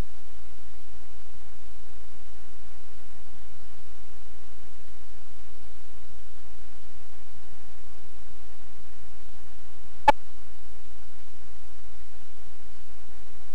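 A corrupt frame decoded at 10.08 to 10.10 s gives a brief, fairly loud blip lasting about 26 ms. Bits in what sounds like a single compressed frame were damaged, and the decoder played it anyway rather than concealing it. The misread values put energy at frequencies where it does not belong. The result is a short chirp-like burst, peaking at around -10 dBFS, that stops when the next intact frame begins.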